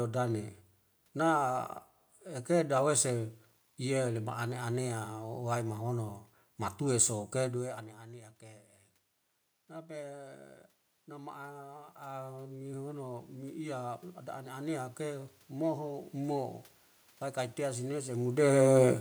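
From 3.14 s to 5.74 s the speech turns grainy, with a rough, signal-following distortion that thickens on quieter syllables and sputters in the softest moments. This points to low bit depth without dither, likely from rounding to about 9 bits. The error sits roughly 40 dB below the signal and tracks it. On a waveform, low-level stretches appear stair-stepped. On a spectrogram, a broadband haze fills the gaps between harmonics only during that span.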